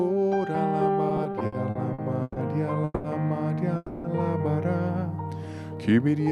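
From 1.09 to 2.39 s, repeated stalls (stutter): nine late-packet gaps, up to 140 ms, are filled by repeating sound, so the audio drags and appears as smeared, stretched bands on a spectrogram. Call audio freezes at 2.84 to 3.07 s and 3.76 to 4.07 s, likely from a starved jitter buffer, sustain a fading buzz or hiss for 200 and 280 ms, showing as flat, decaying bands ending in a brief dropout.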